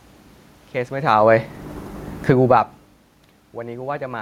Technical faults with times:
0.93-3.08 automatic gain falling

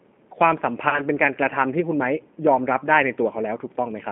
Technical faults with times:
0.00-4.12 G.729 codec
0.89-1.02 VoIP packet loss concealed by the speech codec

